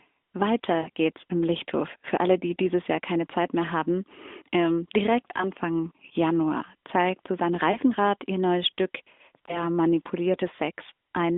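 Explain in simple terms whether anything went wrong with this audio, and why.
Lost AMR speech frames occur at 0.82–0.89 s, just before "geht's im", and at 5.38–5.46 s, right after "mehr haben ähm direkt". They occur again at 7.72–7.78 s, just before "ihr neues", and at 9.46–9.63 s. Radio errors corrupted short chunks of the phone signal, about 40 ms at the first spot and 20 ms at the others. The decoder filled each gap by repeating the last good sound more quietly, so you hear a brief dip or warble in this narrowband, phone-quality speech.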